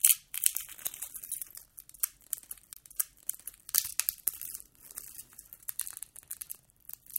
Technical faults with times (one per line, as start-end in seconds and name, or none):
2.74-2.76 CD skip